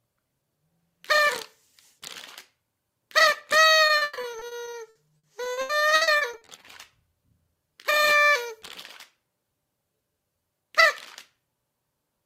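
From 3.87 to 6.65 s there is repeated packet loss, giving a robotic sound. Packets kept dropping out, which suggests about two dozen gaps. Each was filled by extending the previous sound, up to 140 ms at a time. Roughly a third of the stretch is patched. It sounds choppy, with pieces missing.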